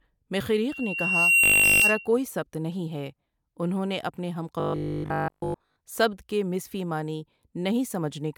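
From 0.70 to 2.07 s, loudspeaker feedback squeal takes over. The microphone picks up its own loudspeaker, and a 2.8 kHz tone swells over roughly 0.7 s to about 10 dB above the speech, ending before "کوئی سبت". Inside it, from 1.44 to 1.82 s, and again from 4.60 to 5.76 s before "سبت کے مضفی معنی", the speech turns into a rigid 50 Hz buzz. This robotic sound likely comes from a 20 ms buffer being repeated while new audio arrives late. The first stretch is repeated throughout, and the second mostly.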